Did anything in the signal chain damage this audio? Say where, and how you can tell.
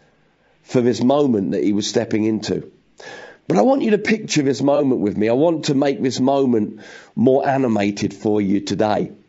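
Yes. At the codec stage, the whole clip carries the sound of low-delay AAC compression, likely AAC-ELD. The speech is rough and grainy, with noise filling the gaps between the pitch harmonics and a top band that sounds thin and synthetic. The damage is plainly audible, which points to a low bitrate of around 32 kbps. At that bitrate there aren't enough bits left to code fine spectral detail.

Further along, in the network or transport stage, there is AAC frame loss with concealment between 4.76 and 4.81 s. For roughly 50 ms the speech turns into a brief smeared, noisy patch. That fits a single lost frame of about 30 ms. The decoder covered the gap by rebuilding the frame from the last good spectrum, so the audio there has roughly the right energy but no real detail.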